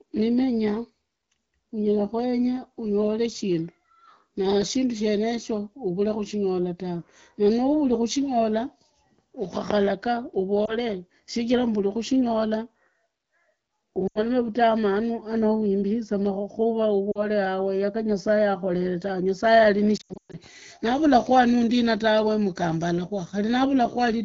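Speech over an AMR wideband (HD Voice) link, with a band-limited sound that fits roughly 12.65 kbit/s, carrying lost AMR speech frames. At 10.66–10.73 s, just before "shijira mburi kushinyola", a single 20 ms frame is concealed. At 14.07–14.22 s a 80 ms run is concealed. At 17.11–17.25 s a 40 ms run is concealed. At 19.97–20.37 s 260 ms of losses are scattered across 360 ms, with runs up to 120 ms. In each gap the decoder replays the last good pitch and vocal tract settings at falling gain, so the single lost frame gives a brief dip, the longer runs drop to near silence within two frames, and the voice returns weak or rough for a moment. On a spectrogram the harmonics run flat and dim, then briefly break off. The waveform shows the envelope tapering into a short dip.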